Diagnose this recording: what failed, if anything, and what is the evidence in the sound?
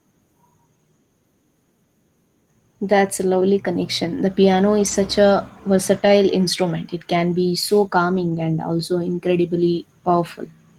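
Three short stretches of the speech turn rough and grainy without ever dropping out: 4.79 to 4.93 s, 5.93 to 6.07 s, and 8.15 to 8.33 s. This is a network fault, a lost packet rebuilt from error correction. Each time, packets went missing, but the next packet carried a low-bitrate backup copy, and the Opus decoder played that instead. The rebuilt audio lasts 80, 80 and 100 ms, which fits runs of four, four and five 20 ms packets.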